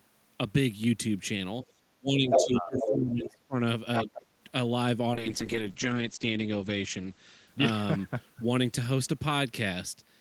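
Speech suppressed in double talk runs from 1.96 to 3.6 s, with the speech dipping by as much as about 25 dB over roughly one and a half seconds, plus a brief, shallower dip of about 5 dB at 4.01 to 4.1 s. The likely cause is an echo canceller that could not tell the talker from loudspeaker echo while both sides spoke, and so turned both down. The other side's voice leaking through appears at 2.29 to 2.45 s, somewhat louder than the speech, at 2.77 to 2.91 s, level with it, and at 3.96 to 4.26 s, a little below it. This is likely far-end audio from the loudspeaker that the echo canceller left in the microphone signal. A call bitrate drop from 5.15 to 9.03 s takes the encoder from 40 to 9 kbps, holding the lowest rate for 1.32 s. The coarser coding makes the speech rough, and the bandwidth narrows from 20 kHz to 8 kHz, muffling the top end until the rate recovers.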